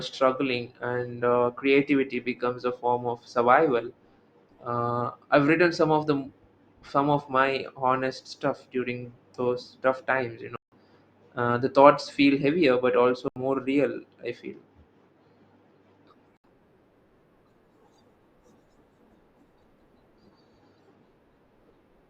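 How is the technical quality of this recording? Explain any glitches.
Three dropouts interrupt the speech, each a block of digital silence. They fall at 10.56 s (160 ms), at 13.28 s (80 ms, between "feel heavier but also" and "real I feel") and at 16.37 s (72 ms). Runs of samples were replaced with zeros. The sound stops and restarts with no fade. Each is heard as a short hole.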